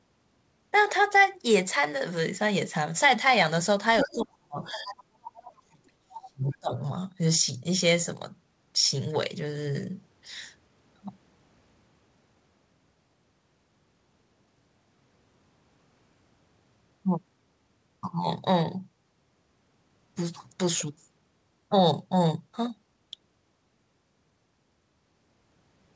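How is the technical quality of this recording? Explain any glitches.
The recording is speech, and its trouble is concentrated between 4.0 and 6.8 s, where echo control on a speakerphone-style call falters. The audio stops at 8 kHz, consistent with a G.722 wideband call path.

Other side's voice leaking through, at 4.0–4.15, 4.62–5.03, 5.23–5.41, 6.1–6.3 and 6.48–6.56 s: a second, fainter voice intrudes in short scraps, roughly 10 dB below the main talker at first and about 20 dB below by the later bursts. The likely cause is the far end playing over a loudspeaker and the echo canceller failing to strip all of that pickup from the microphone, so residue slips out.

Speech suppressed in double talk, at 4.02–4.97 and 5.4–6.78 s: while those leaked scraps overlap the talker, the main voice sinks, dropping by around 35 dB in the first stretch and around 40 dB in the second. With both sides speaking at once, the canceller likely could not tell its own talker from the echo and pulled everything down together, leaving the talker's speech turned down for about a second and then a second and a half.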